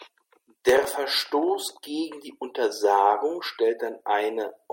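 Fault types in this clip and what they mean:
Processor overload crackle: the processor repeatedly failed to fill its very short audio buffers, well under a millisecond each, in time. Around 0.69 to 0.85 s, a handful of missed buffers replay stale audio with hard edges, giving a brief gritty crackle over the speech.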